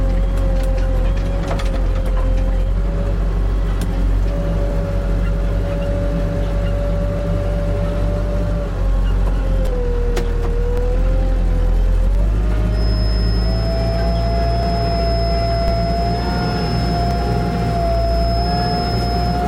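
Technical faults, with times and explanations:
2.23, 7.19, 9.67, 12.15, 14.63 and 17.11 s: audio missing between chunks. The everyday sounds skip briefly, losing a sliver of roughly 20 ms each time, with the two sides butted together. The steady spacing of about 2.5 s points to a recorder likely dropping samples at each chunk boundary.
10.78 and 15.68 s: DC step. The waveform's zero line jumps suddenly, so you get a low thump while the sounds carry on unchanged. The offset then drains away at the rate of a 20 Hz high-pass, so there's no lasting shift afterward.
12.67 s to the end: feedback whistle. A thin, steady 5.2 kHz tone sits about 20 dB under the sounds, swelling and fading slowly in level. It's likely a speaker-to-mic loop hovering right at the edge of feedback without quite running away.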